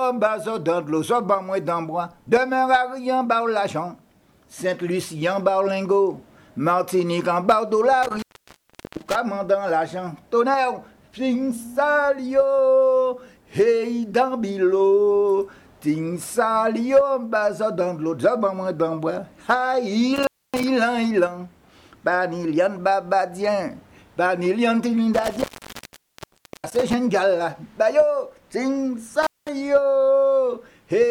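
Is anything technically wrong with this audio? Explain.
Yes, there is intermittent contact, a loose cable or plug briefly breaking the signal path, at 8.03–9.15 s (open for 0.73 s), 20.16–20.64 s (0.27 s), 25.14–26.93 s (1.2 s) and 29.22–29.49 s (0.2 s). Each time the audio drops out, leaving only faint hiss, with crackle as the contact scrapes open and shut. That scratchy edge and residual hiss set it apart from a clean digital dropout, which falls to true silence without crackle.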